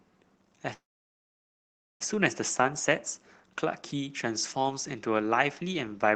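At 0.73 s the speech stalls in what sounds like a call audio freeze. There's a brief smeared tail and then about 1.2 s of silence until 2.02 s, when the speech picks up exactly where it left off. Nothing seems lost, but everything after runs roughly 1.27 s late. That's likely packets held up in transit, draining the jitter buffer. The call path itself sounds like Opus, band-limited around 8 kHz.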